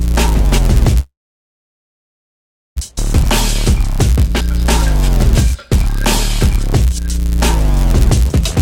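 A block size mismatch (padded) runs through the whole music clip, from the first moment to the last. Each block written into the next stage is a little shorter than the block that stage reads, and the shortfall is filled with zeros. That tiny gap in every block produces a steady buzz at 99.6 Hz, the block rate, and stretches the music to 0.996 times its speed, about 0.4 percent slower.

From 1.00 s to 2.78 s there is a call audio freeze, likely caused by packets stalling in transit until the jitter buffer ran dry. The receiver first carries the last sound on as a short fading buzz or hiss, then falls silent for about 1.63 s of the roughly 1.76 s filled in. When the packets arrive, the music picks up exactly where it stopped, with nothing lost, but everything after is delayed by that 1.76 s.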